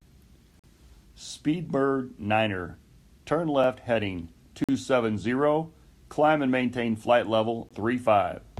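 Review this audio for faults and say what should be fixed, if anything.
Segment timestamps in this speech stream don't line up, so the player pads each gap between stream segments with silence. Hard-edged holes interrupt the audio at 0.59–0.64 s (44 ms), 3.64 s (4 ms), 4.64–4.69 s (46 ms) and 7.69 s (20 ms), all on one-second segment boundaries. Stamping each segment to begin exactly where the previous one ends would remove them.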